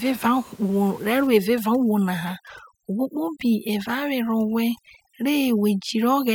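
Speech with overdone noise removal from 1.27 s to the end of the clip, where a noise reducer set far too aggressively starts gating individual frequency bands whenever they sit close to its noise estimate. The room noise, which ran about 26 dB below the speech, collapses into near silence dotted with twinkling specks, and the quieter parts of the voice are stripped away. On a spectrogram the background shows as isolated flickering dots, and the speech harmonics appear ragged and broken.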